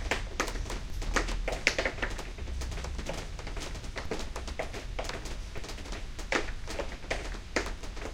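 Low thumps land at 0.9 s, 4.05 s and 5.58 s over the sound: DC steps, where the waveform's zero line jumps by about -31, -31 and -29 dBFS, then drains away through a 5 Hz high-pass rather than holding.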